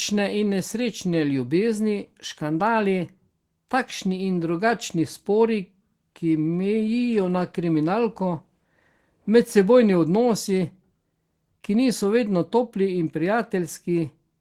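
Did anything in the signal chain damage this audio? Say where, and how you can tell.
No, nothing along the way from capture to playback seems to have harmed this speech recording, so there's no stage to point a finger at.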